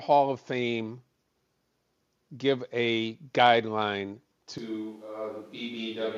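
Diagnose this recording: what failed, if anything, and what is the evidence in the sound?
At 4.58 s, just after "give a guideline", the speech turns suddenly roomy and thin, drops about 5 dB and sits over room noise roughly 35 dB down until the end. At the capture stage, this is likely a switch to a distant microphone after the close mic's signal dropped out.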